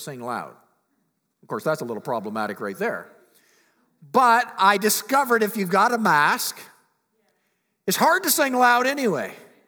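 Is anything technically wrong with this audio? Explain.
No, nothing technically wrong can be heard in this speech recording. The audio holds steady throughout, with no disruption or distortion that would point to a problem in how it was captured or delivered.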